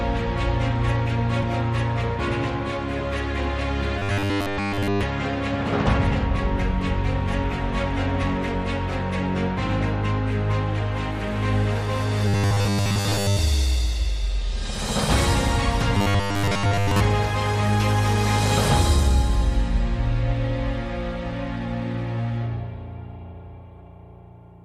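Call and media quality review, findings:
Robotic sound from repeated short buffers at 3.99–5.04 s, 12.28–13.39 s and 15.95–17.00 s: rigid 100 Hz buzz over the sound, nearly all repeated in the first, about 70% in the later two. Likely jitter-buffer underrun looping a 10 ms block.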